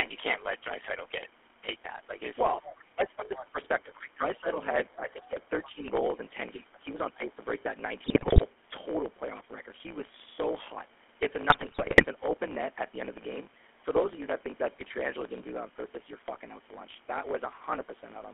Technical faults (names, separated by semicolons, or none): block size mismatch (truncated); GSM full-rate codec; speech suppressed in double talk; other side's voice leaking through; GSM bit errors